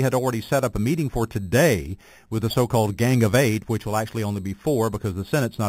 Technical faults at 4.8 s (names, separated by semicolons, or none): imaging from sample-and-hold upsampling